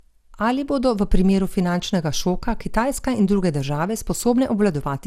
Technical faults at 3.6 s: generation loss

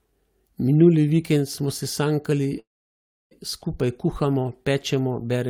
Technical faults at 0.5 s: none

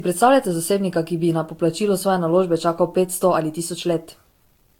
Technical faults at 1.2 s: low bit depth without dither; generation loss

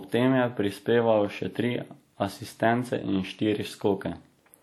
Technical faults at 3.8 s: WMA compression

